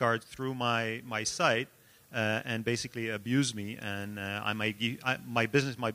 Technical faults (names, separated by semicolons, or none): none